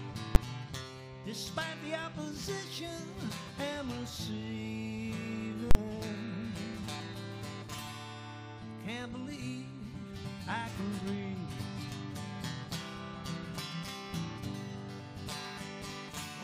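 A calculation produced infinite or invalid numbers, pinning the output at one extreme value far beyond the audio's peaks and causing invalid numbers at full scale twice. At 0.35 s the 10 ms block lands as a single loud bang. From 5.71 to 5.75 s, a 40 ms block gives a sharp pop at each edge with silence between.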